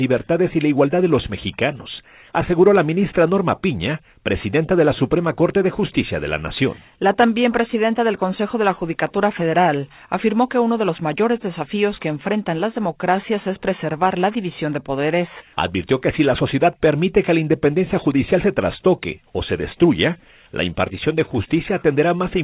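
No technical faults can be heard anywhere in the audio, which arrives over a call path with nothing above 4 kHz, a band limit that points to a narrowband telephone codec such as G.711 mu-law at 64 kbps.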